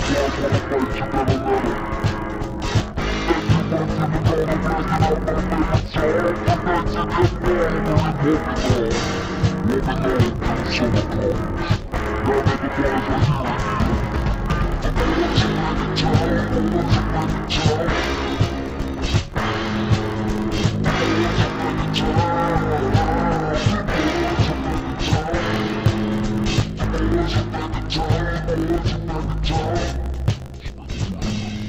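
Throughout, interleaved audio read as planar in 20 ms blocks halves each channel's pitch and leaves a dull, robotic 50 Hz buzz.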